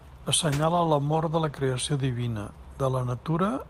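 From 0.44 s to 1.89 s the speech turns rough, watery or muffled, then clears. This is a call bitrate drop. The encoder coded far more coarsely and lost high frequencies, which fits a fall from 48 to 14 kbps, held for about 1.4 s.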